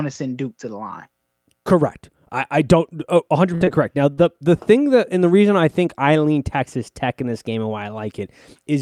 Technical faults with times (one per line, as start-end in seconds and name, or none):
3.55-3.63 burst of packet loss
3.65-3.69 short concealed packet loss
4.13-4.19 short concealed packet loss